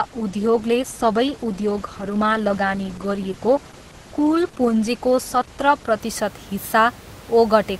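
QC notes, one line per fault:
0.0–6.0 s, adaptive stream starting at a low bitrate: the player opens on a low-rate version, sounding like Opus around 12 kbit/s, so treble is thin and synthetic and artefacts heavier, nothing above 12.1 kHz. Then it jumps, gaplessly, to something like 64 kbit/s.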